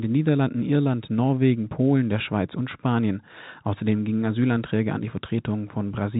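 No faults to report in this speech: the band stops at about 3.8 kHz, which fits ordinary G.711 telephone coding at 64 kbps, and nothing else intrudes.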